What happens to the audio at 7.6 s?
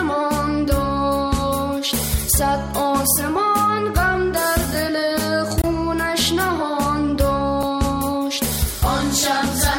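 At 7.63 s there is a block of digital silence. For about 5.3 ms the signal drops straight to silence and then returns. That length fits a 256-sample output buffer that was not filled in time. There is no fade on either side. At this brief length, the gap is heard as a short tick or dip rather than an audible hole.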